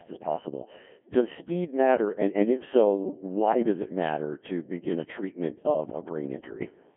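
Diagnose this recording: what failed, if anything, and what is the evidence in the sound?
Codec stage: a Codec 2 vocoder, fitting a 1.6 kbit/s mode, rebuilds the speech from sine waves throughout, leaving it robotic, buzzy and empty above 3.7 kHz.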